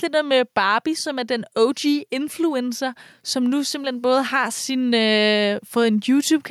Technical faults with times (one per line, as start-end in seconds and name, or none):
0.00-6.51 gain pumping